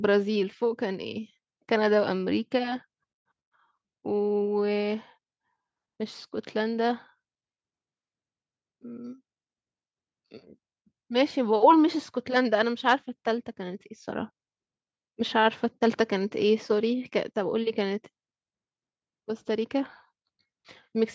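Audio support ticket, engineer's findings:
No faults found in the speech; the call microphone processing is behaving as expected, with the lowest bass rolled off by its high-pass filter and nothing above 8 kHz.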